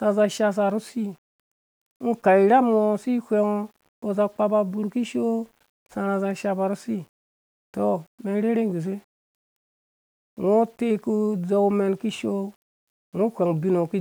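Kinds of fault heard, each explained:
Low bit depth without dither: the speech carries a grainy, gritty distortion throughout that shifts with the voice, roughest on quiet syllables, with faint sounds sputtering or dropping out. The likely cause is rounding to about 9 bits without dither, leaving error around 40 dB below the signal.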